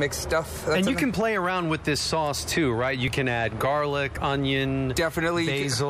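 A couple of skips at 0.87 s and 3.08 s, each with a small jump in the audio where roughly 10 ms just vanishes with no gap. That's most likely a dropped buffer (overrun), with samples overwritten before the software collected them.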